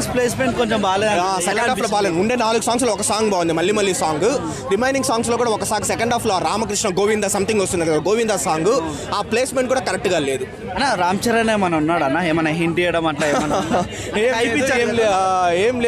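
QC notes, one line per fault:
No fault found, so there are no fault lines to give.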